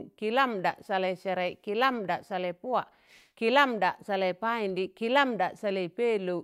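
A speech recording with nothing technically wrong with it.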